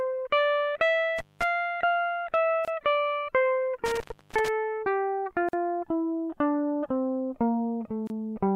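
At 1.18 to 1.44 s the music drops out through intermittent contact: a loose cable or plug opens for about 194 ms, with crackle at both edges and faint hiss beneath while the line is broken. At 2.65 to 2.68 s a gap at a join of encoded pieces appears, 27 ms long. Two separately encoded sections were spliced without trimming the encoder's start-up delay and end padding. The result is a short break with edges smeared by the codec, and the music resumes exactly where it stopped.

A second, longer contact dropout runs from 3.86 to 4.48 s, open for about 336 ms, again framed by crackle with hiss underneath. Further join gaps follow at 5.49 to 5.53 s (45 ms) and 8.07 to 8.10 s (28 ms). The crackle and hiss set the contact faults apart from the join gaps, which are brief and clean, with codec smearing at their edges.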